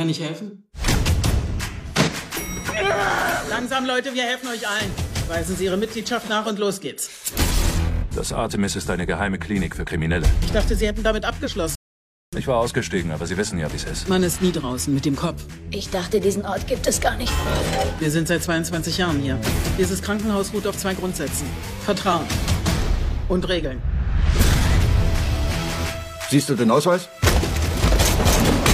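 At 11.75 s the sound stops dead. Silence holds until 12.33 s, and then playback picks up exactly where it left off. This is a rebuffering stall. The player used up the audio it had downloaded and had to wait for more to arrive. Nothing is skipped or repeated. The gap simply inserts about 0.57 s of dead air, so everything after it lands that much later than it should.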